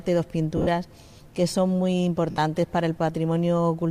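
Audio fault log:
0.57–0.67 s and 2.30–2.38 s, lost LE Audio frames: two short dropouts in the Bluetooth LE Audio stream, about 90 ms missing in the first, scattered over 100 ms with its longest gap around 50 ms, and 70 ms missing in one unbroken gap in the second. Each fits 10 ms frames going missing. The LC3 decoder covers each gap by repeating the last spectrum with randomised signs, so the sound smears into a brief noisy wash, fading during the longer 2.30 s gap.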